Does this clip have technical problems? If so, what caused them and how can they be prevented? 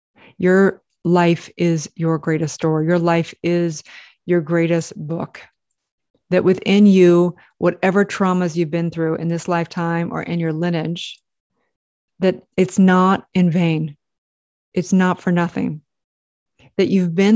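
No, no technical faults can be heard in this recording, so there is nothing to trace back or prevent.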